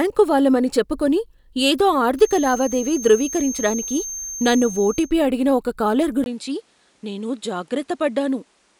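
A feedback whistle runs from 2.15 s to 5.15 s. A thin, steady tone near 6.4 kHz sits behind the speech, roughly 15 dB below it, swelling and fading slowly in level but never building up. This most likely comes from a loudspeaker-to-microphone loop held just at the edge of feedback: one frequency keeps recirculating with almost enough gain to sustain itself, yet not enough to run away into a howl.

An input switched to a poorer device follows at 6.24 s and lasts to the end. There is a brief silence of about 20 ms at the change. After it, the speech loses everything above 11.4 kHz, drops roughly 5 dB in level, and carries a new background noise around 35 dB below the signal. The likely cause is the system moving its input mid-recording to a different, narrower-band microphone or headset, which brings its own tone and noise floor.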